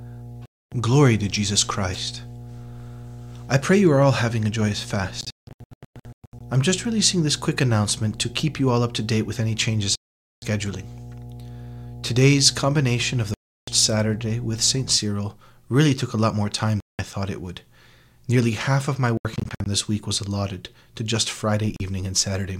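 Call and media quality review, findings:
Mains hum, 0.0 to 14.97 s: steady 60 Hz tone about 15 dB below the speech. Ground loop or nearby transformer coupling. Fixed pitch and constant level set it apart from low-frequency rumble or handling noise.

Bluetooth dropout, likely from late packets on the headphone link: silent holes at 0.46–0.72, 9.95–10.42, 13.34–13.68, 16.80–16.99 s (after "a lot more time", before "thought it would") and 21.76–21.80 s (after "was allotted to just"). There are scattered clusters at 5.21–6.40 s (longest gap about 0.17 s) and 19.17–19.66 s (after "half of my", before "this week was allotted"). Speech resumes further on, as if it had kept playing, which sets this apart from a buffer stall, which picks up where it stopped.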